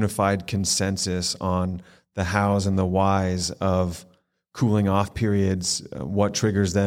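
Listening to this speech recording, nothing technical stands out as wrong at any point.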